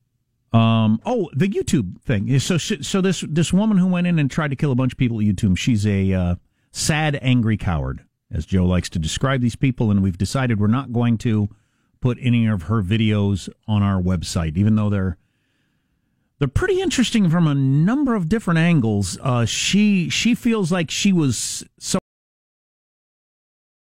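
A cut-off end hits at 21.99 s, just after "feels like she was": the speech stops mid-sound and drops straight to digital silence, which holds to the end of the clip. Nothing fades or decays. The utterance is simply severed, because the final stretch of audio was never written out or played back. The last buffers were lost before reaching the output, leaving about 1.8 s of dead silence where the sentence should have continued.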